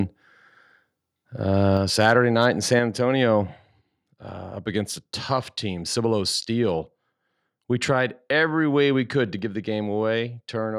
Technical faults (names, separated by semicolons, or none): microphone overload; microphone volume stepped down